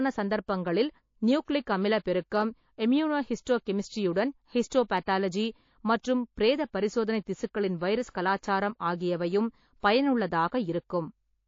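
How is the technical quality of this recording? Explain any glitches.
The recording has clear, continuous codec damage and three brief smearing glitches on sharp onsets.

Throughout, the speech carries the marks of heavy lossy encoding, likely MP3 compression at a very low bitrate around 32 kbps. Starved of bits, the encoder trims the treble and drops weak frequency lines, leaving a watery, swirly texture and dull, smeared consonants.

Pre-echo appears at 1.45 to 1.48 s, 8.13 to 8.15 s and 9.80 to 9.83 s. The transform block spreads quantisation noise evenly, so noise meant for a loud attack leaks backward. A hiss about 14 to 17 dB above the background precedes each onset by 21 to 34 ms, softening the attack.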